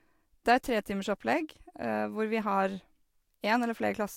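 From start to finish, the speech carries nothing above 16.6 kHz, with a hard ceiling and the lingering artefacts of a lossy codec, though the file itself is a high-rate MP3. That mismatch is the tell of low-bitrate audio saved at a high bitrate: a likely earlier pass near 63 kbit/s stripped the top band and detail, and re-encoding at 256 kbit/s preserved the damage. A clean high-bitrate encode would keep more top end and sound tidier.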